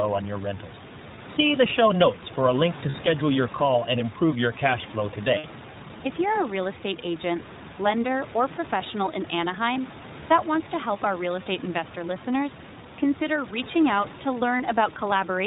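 From the first second to the end, the speech carries the hard bandwidth limit and slightly rough, synthetic grain of the iLBC codec. Each short frame's excitation is rebuilt on its own, which fits a 20 ms frame at around 15.2 kbps. A spectrogram shows nothing above 4 kHz. The room noise, about 16 dB below the speech, takes on the same coarse texture.

Lost iLBC frames then break in six times. The gaps are 20 ms at 1.16 s, 40 ms at 2.90 s and 60 ms at 5.38 s. Three more 20 ms gaps fall at 9.74 s, between "lender or professional in" and "that wants to help", at 11.44 s, between "to help our real" and "investor listeners consider reaching", and at 14.58 s, just after "consider reaching out to". At each gap the decoder repeats the last pitch cycle mixed with noise, so you hear a brief held, buzzy vowel. The speech is clean again right after each gap. On a spectrogram each gap is a flat band of steady harmonics, and on the waveform it is a repeating cycle with noise mixed in.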